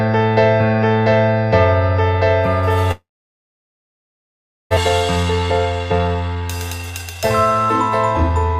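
Long network dropout, 2.91 to 4.79 s: the last sound trails off as a fading buzz or hiss and then about 1.7 s of silence. This is likely a stream interruption, and roughly a second of audio never returns. It resumes later, with about 0.7 s of extra delay.

Jitter buffer speed-up, 5.16 to 7.19 s: to work off that built-up delay, the receiver repeatedly cuts out short pitch-period slices, roughly 0.7 s in all. The audio plays at about 130% speed with unchanged pitch and sounds rushed.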